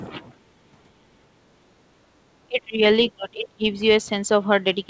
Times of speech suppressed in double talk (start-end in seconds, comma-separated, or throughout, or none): 2.47-2.81, 3.11-3.64